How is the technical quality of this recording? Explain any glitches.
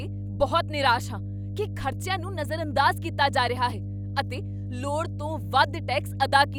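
The recording's technical quality is poor because of one fault that runs through the whole speech clip. Mains hum sits at 50 Hz from start to finish, nearly as loud as the speech itself. A ground loop or nearby transformer is leaking the power line into the signal path. It sounds like a steady low drone under everything. On a spectrogram it shows as unbroken horizontal lines at 50 Hz and its low harmonics. In the waveform it appears as a constant thick band, even between phrases.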